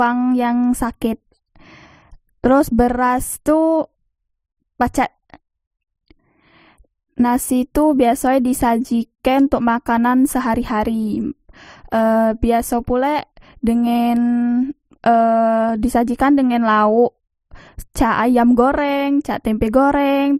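From start to finish the speech has a layered, smeared coarseness: swirly, watery artefacts sit alongside a second, grainier roughness, and nothing is heard above 15.8 kHz. The likely cause is transcoding between lossy codecs. The character fits a low-rate MP3 encode, around 40 kbit/s, later re-encoded to Opus near 48 kbit/s. Opus spent its bits reproducing the MP3 damage, added its own artefacts on top, and the lowest cut-off in the chain remained.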